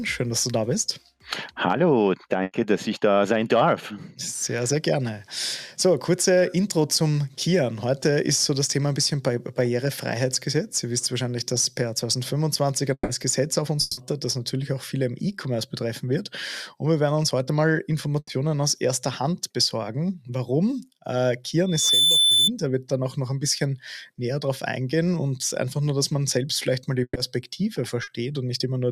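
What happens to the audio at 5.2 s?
Nothing goes wrong at 5.2 s; the audio plays through that moment intact, with no dropout, click, distortion or other fault.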